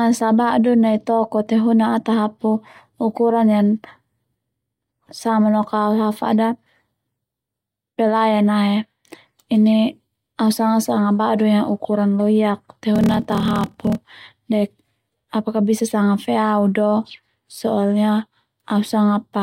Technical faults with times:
12.93-14.03 block size mismatch (padded)

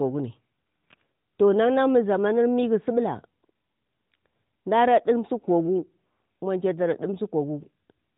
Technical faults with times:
none

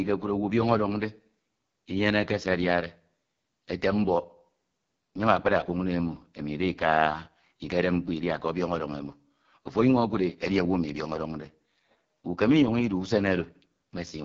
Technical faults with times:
0.00-14.24 AMR wideband (HD Voice) codec

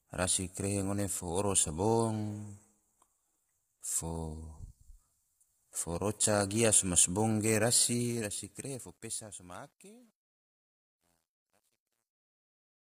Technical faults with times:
0.00-12.85 low-delay AAC compression
7.87-12.85 truncation distortion on a fade

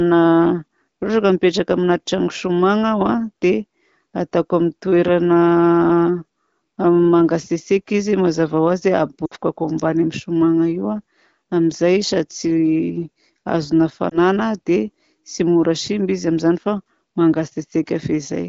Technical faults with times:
9.25-9.35 lost AMR speech frames
14.10-14.18 lost AMR speech frames

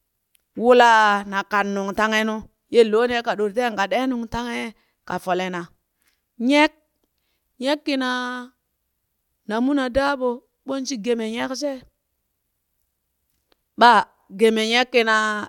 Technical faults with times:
none

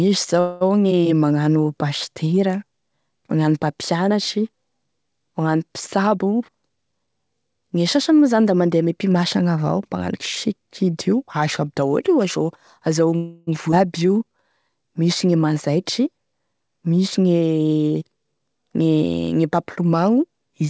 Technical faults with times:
0.40-0.63 call audio freeze
5.97-7.07 jitter buffer speed-up
13.16-13.49 call audio freeze
13.71-13.74 skip ahead
14.02-14.43 jitter buffer slow-down
15.69-16.69 jitter buffer speed-up
17.65-18.87 jitter buffer speed-up

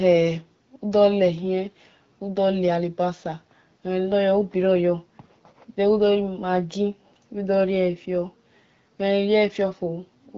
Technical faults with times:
none

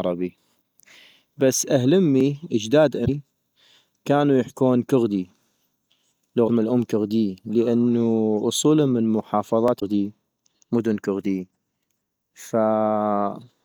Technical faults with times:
2.20 audio missing between chunks
3.04-3.09 broken MP3 bit reservoir
5.90 audio missing between chunks
6.47-6.50 broken MP3 bit reservoir
9.68 audio missing between chunks
9.78-9.83 broken MP3 bit reservoir

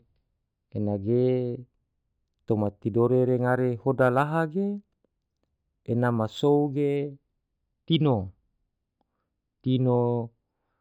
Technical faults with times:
1.60-6.96 imaging from linear upsampling

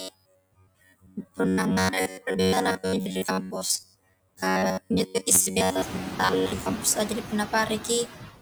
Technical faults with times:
0.00-8.41 noise suppressor artifacts
0.01-6.74 robotic sound from repeated short buffers
0.57-1.39 speech cut by the noise suppressor
5.08-5.27 speech cut by the noise suppressor

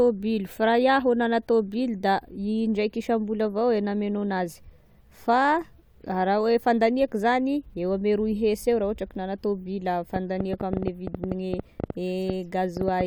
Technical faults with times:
10.16-13.02 train of clicks

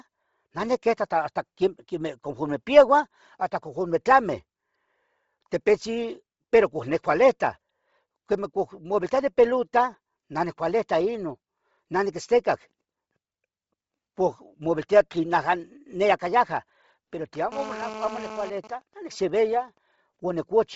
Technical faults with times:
0.00-20.76 Bluetooth LC3 compression
17.52-18.50 GSM phone buzz
18.57-19.78 GSM signalling bursts

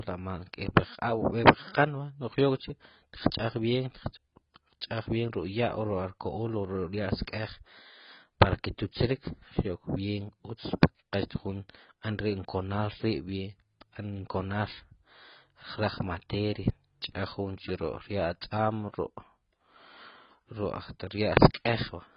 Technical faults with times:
0.00-22.16 AAC compression

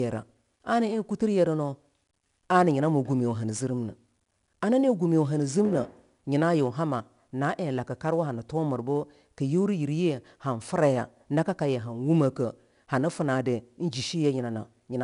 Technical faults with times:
0.00-15.03 4-bit ADPCM compression

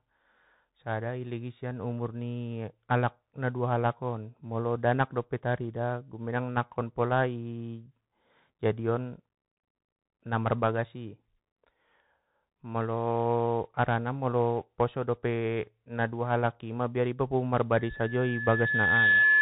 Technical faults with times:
0.00-19.42 Bluetooth CVSD headset codec
17.73-19.42 loudspeaker feedback squeal

